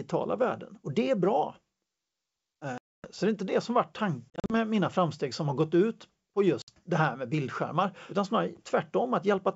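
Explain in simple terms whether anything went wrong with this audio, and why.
Yes, something went wrong three times. The speech drops into sudden dead silence from 2.78 to 3.07 s, breaks up into several short gaps between 4.30 and 4.54 s, and cuts out briefly from 6.62 to 6.71 s. This is packet loss on an ADPCM call. Chunks of the wideband G.722 call never arrived and were replaced with silence. Because this kind of coding predicts each sound from the previous one, the receiving end lost track. So right after each hole the speech returns slightly distorted before settling.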